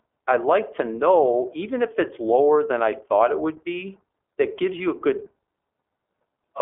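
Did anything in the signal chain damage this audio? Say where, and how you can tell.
Yes. The damage is at the codec stage: the whole speech clip has passed through the iLBC codec. Nothing survives above about 3.6 kHz, and the band sits roughly between 300 Hz and 3.4 kHz, a telephone-line shape. The roughness is plainly audible and points to 20 ms frames, each with its excitation coded independently of the last, consistent with the 15.2 kbps mode. The result is muffled, slightly buzzy, synthetic-sounding speech from start to finish.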